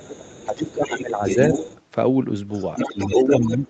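A second, quieter voice runs underneath this speech clip from the start to 1.8 s and again from 2.52 s to the end, sitting roughly 10 dB below the main talker. This is the other side's voice leaking through, likely because the far end's loudspeaker output reached the microphone and the echo canceller left part of it in place. During both stretches the main talker also sinks. From 0.46 s to 1.22 s the voice dips by around 10 dB in pieces that add up to about half a second, and from 2.87 s to the end it drops much harder, by as much as 20 dB. This pattern is speech suppressed in double talk: with both sides talking at once, the canceller likely could not tell the near voice from the echo and turned both down together. The whole clip tops out at 8 kHz, which fits a call codec running at that bandwidth.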